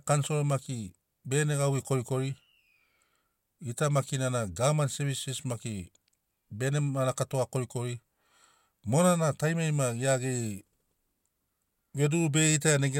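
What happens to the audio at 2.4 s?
Nothing goes wrong at 2.4 s: the speech carries straight through that moment with no dropout, click, distortion or other fault.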